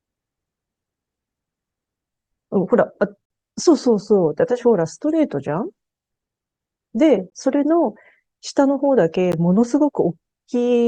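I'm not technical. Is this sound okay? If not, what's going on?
No. The speech has brief dropouts to silence, each a gap between stream segments, where two 2-second chunks of the stream don't quite meet and the player fills the hole with nothing. They occur at 3.25–3.30 s (about 48 ms), 7.30 s and 9.32 s. No speech goes missing; the sound just stops and restarts abruptly.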